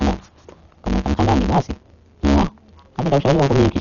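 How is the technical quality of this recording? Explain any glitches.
Technical quality is poor: two faults run through the whole recording.

The speech carries a steady buzz at 138 Hz and plays back 1.6 times too fast while keeping roughly its normal pitch. This is a block size mismatch (truncated): one stage writes blocks longer than the next reads, and each block's tail is discarded. That pattern fits 512-sample blocks.

The sound is also dull, with nothing above 6.9 kHz and a rough, fluttering noise around voiced tones. The likely cause is heavy Dolby Digital compression. A low bitrate, around 40 kbps, leaves many frequency lines without mantissa bits, so the decoder fills them with noise.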